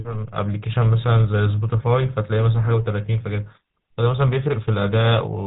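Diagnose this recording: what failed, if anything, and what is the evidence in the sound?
The codec stage failed: the GSM full-rate codec is audible across the whole clip. The speech carries a constant buzzy, gravelly roughness, and nothing survives above about 3.8 kHz. This fits a 13 kbps link that rebuilds the voice from a vocal-tract model driven by coarse, regularly spaced pulses.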